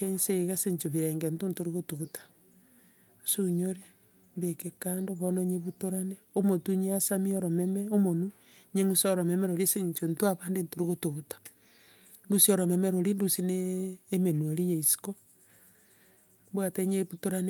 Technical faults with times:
none

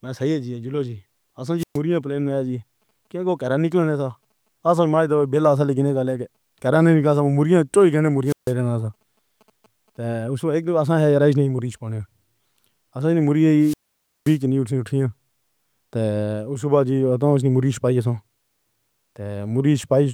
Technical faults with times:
1.58-1.78 wireless microphone squelch dropout
8.25-8.53 wireless microphone squelch dropout
13.60-14.39 wireless microphone squelch dropout

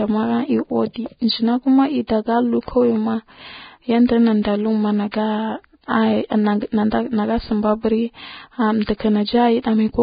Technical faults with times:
0.00-10.03 Vorbis compression
2.07-2.09 pre-echo

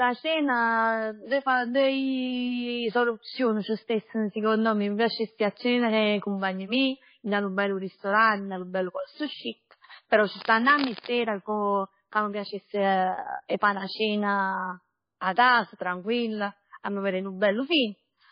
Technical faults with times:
0.00-18.32 MP3 compression
10.30-11.12 cable scratch noise

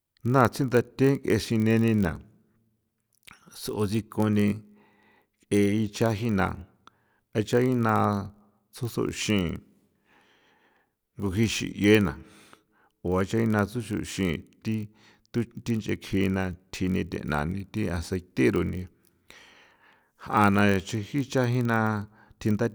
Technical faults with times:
0.00-22.75 block size mismatch (padded)

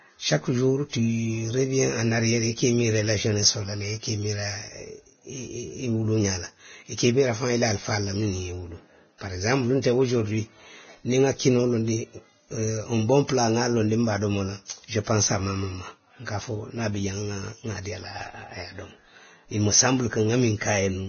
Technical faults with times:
0.00-21.09 Vorbis compression

